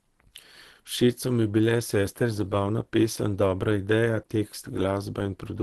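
All the way through, the speech has a plainly audible muffled, hoarse quality with nothing above 12 kHz, likely from Opus compression running in its hybrid speech mode at a low rate, which fits something around 16 kbps squeezing detail out of the upper bands.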